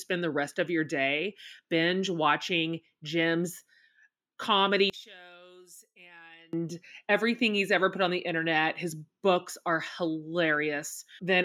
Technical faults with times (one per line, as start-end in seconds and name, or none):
4.90-6.53 one channel inverted